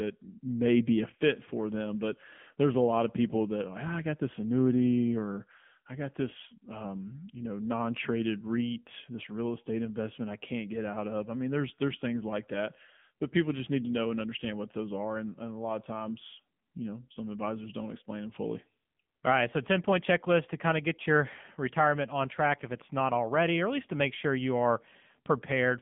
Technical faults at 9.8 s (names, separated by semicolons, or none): AMR narrowband mobile codec